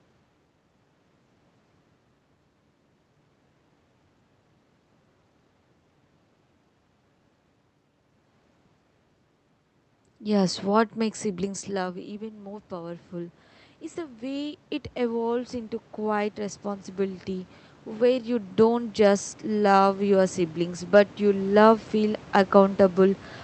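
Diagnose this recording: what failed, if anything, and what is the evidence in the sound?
Automatic gain rising in call processing: voice and room noise swell together, about 6 dB over 10.2–13.4 s, then about 15 dB over 13.9–22.8 s.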